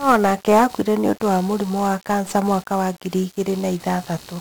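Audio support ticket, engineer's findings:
Computer activity noise, whole clip. Buzzy, scratchy chirping at a rough pulse rate near 70 Hz, sitting well below the speech, changing with machine load rather than with the talker. Probable component: shared ground between audio path and CPU, GPU or mouse circuitry. Load current swings modulate the ground reference, injecting that pulsing into the signal.

1-bit DFPWM compression, whole clip. Speech fuzzy and crackly throughout, treble lost under broadband hiss, damage heavy. Probable component: DFPWM encoder, output consistent with a roughly 48 kbps one-bit stream. One bit per sample only nudges an adaptive level up or down, leaving strong quantisation noise across the band.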